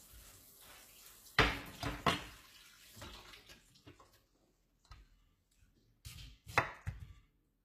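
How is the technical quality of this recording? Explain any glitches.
The recording is marred by plainly audible HE-AAC compression damage from start to finish. The treble sounds grainy and metallic, the likely result of spectral band replication copying lower bands upward instead of coding the real highs, consistent with a bitrate around 20 kbps. On a spectrogram, the upper region shows repeated, smeared patches mirroring lower bands, with nothing above 14.9 kHz.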